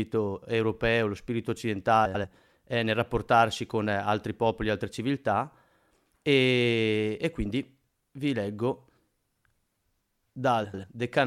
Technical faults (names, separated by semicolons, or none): frames out of order